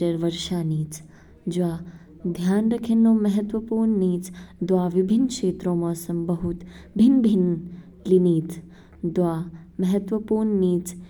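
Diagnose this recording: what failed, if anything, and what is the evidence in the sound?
Listening through the speech recording, nothing stood out that would point to a failure at any stage of the chain.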